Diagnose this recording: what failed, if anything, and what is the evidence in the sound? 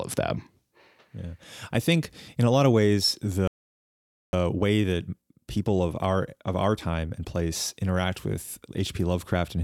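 Playback stall, at the buffer stage. The speech goes silent from 3.48 to 4.33 s, about 0.86 s. The player likely ran out of data.

Time-compressed catch-up, in playback. From 4.33 to 7.33 s the speech runs 1.1 times fast at normal pitch. Small pieces are cut and cross-faded.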